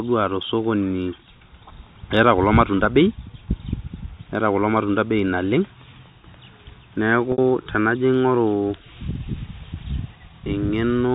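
At 7.32 s, 60 ms of packet loss with pitch repetition sounds like a briefly held, buzzy tone: the last pitch period loops and fades. The waveform shows identical shrinking cycles, and the spectrogram frozen, evenly spaced harmonics under the G.711 4 kHz ceiling.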